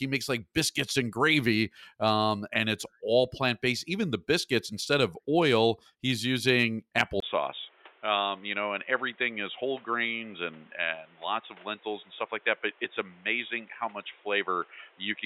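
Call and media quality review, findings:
Input switched to a poorer device, 7.20 s to end, right after "of oil he's using". Brief 20 ms gap, then speech goes dull and boxy. Spectrogram: energy cut off above 3.8 kHz, new noise floor about 30 dB down. Likely a headset call-profile or mic change.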